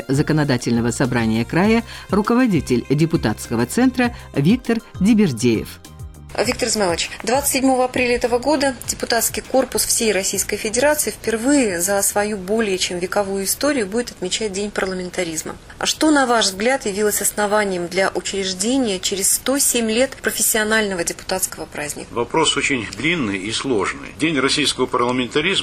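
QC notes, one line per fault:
No faults detected.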